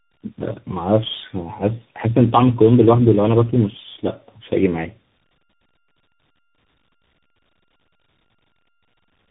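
All the way through, the speech carries tandem speech coding. It sounds like it was decoded and re-encoded by three separate speech codecs in a row, each one working on the previous one's damage. Nothing survives above 3.8 kHz, leaving it rough, muffled and warbly.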